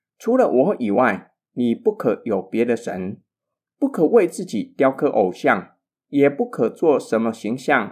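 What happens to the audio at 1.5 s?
Nothing goes wrong at 1.5 s: the speech runs through that moment intact, with no dropout, click or distortion.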